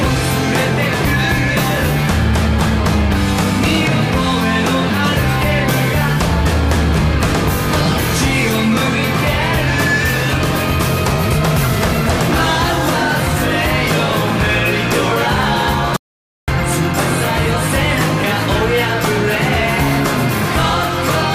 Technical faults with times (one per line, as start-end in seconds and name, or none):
15.96-16.48 audio dropout to silence